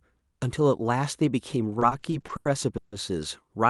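From 1.79 s to 2.95 s the speech suffers repeated stalls (stutter). Packets reached the receiver late, so its jitter buffer ran dry eight separate times. Each time, the receiver stretched the last sound to bridge the gap, fading it during the longest wait of about 150 ms. Around 370 ms is filled this way, roughly a third of that stretch. Nothing is lost. The speech drags and hiccups instead. The call path's band limit near 12 kHz applies throughout.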